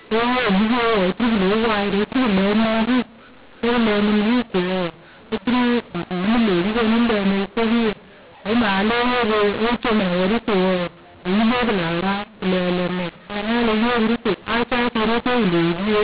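From start to finish the speech sounds harsh and gritty, with loudness that lurches unpredictably: some syllables blare while others shrink, and the pauses never fall silent but fill with a hiss. This is mu-law and A-law mixed up. The telephone audio was written with A-law but read back as mu-law, so every 8-bit code maps to the wrong level and the quietest values land well above zero.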